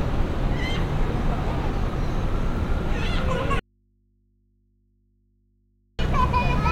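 A clip of sounds that drops abruptly at 3.60 s to a faint hum, around 40 dB below the sound, until it returns at 5.99 s; an audio dropout to a faint residue, likely the signal lost while the open input stayed live.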